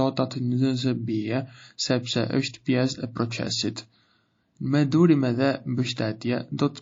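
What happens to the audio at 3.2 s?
At 3.2 s the speech carries the same MP3 compression damage heard across the whole clip, plainly audible and consistent with a bitrate near 32 kbps. Short of bits, the encoder likely cut the treble at a fixed frequency and dropped weak frequency lines that flicker on and off between frames, giving a watery, swirly quality, chirpy s sounds and smeared onsets. A spectrogram shows a flat ceiling across the top and patchy, blinking gaps below it.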